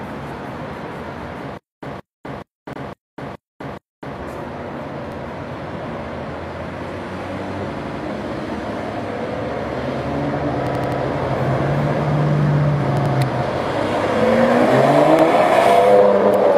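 From 1.58 to 4.2 s a 172 ms fragment returns six times, each followed by about 251 ms of dead silence, a stutter with silent gaps most likely from a stalled stream retrying. Repeated-buffer stutters, 85 ms pieces replayed with hard joins (fits a 4096-sample buffer), occur at 2.73, 5.12, 7.77, 10.67, 12.97 and 15.19 s.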